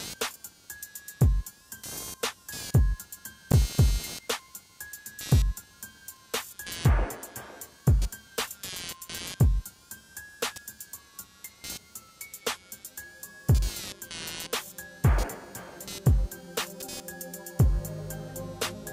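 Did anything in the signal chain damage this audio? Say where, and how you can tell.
Yes. In the analogue wiring, the computer's changing load is disturbing the audio circuit's shared ground, producing computer activity noise. A buzzing pulse at around 200 Hz, roughly 20 dB below the wanted sound, runs through the whole clip and follows the machine's activity rather than the audio.

At the driver or buffer stage, fresh audio arrived late twice, so the device replayed its last block, a repeated buffer. At 3.52 to 3.54 s and 13.74 to 13.76 s, a 21 ms fragment sounds twice with hard joins, heard as a brief stutter. That length fits a 1024-sample buffer.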